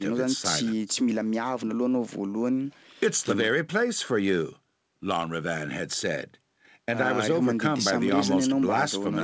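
No technical faults are audible in this speech.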